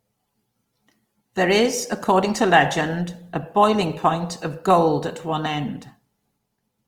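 From start to finish the speech has a plainly audible grainy, rough texture. Voiced sounds turn noisy rather than clean, with few spectral holes and little swirling, and content extends up to about 20.4 kHz. This points to Opus compression, likely in its music-oriented CELT mode at a rate that fits roughly 24 kbps. The encoder keeps each band's energy but, short of bits, fills bands with folded or noise-like content, which produces the graininess.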